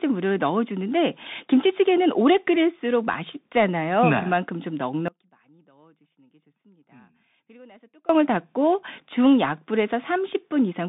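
The Bluetooth CVSD headset codec runs through the whole recording, from the first moment to the last. The speech is confined to a narrow telephone-like band, roughly 150 Hz to 3.7 kHz, with nothing at all above 3.8 kHz. The coder tracks the waveform with one up-or-down bit at a time, consistent with a 64 kbps stream, so loud high-frequency sounds outrun its adaptive step and break up. The s sounds turn scratchy, and a granular hiss sits beneath the speech.

An audio dropout to a faint residue runs from 5.08 s to 8.09 s, about 3.0 s. The speech cuts off abruptly rather than fading. Through the gap only a faint trace of sound remains, some 30 dB below the normal level, before the signal snaps back at full strength. The wanted signal was likely lost upstream while the link after the break stayed open, which is why the gap isn't dead silence.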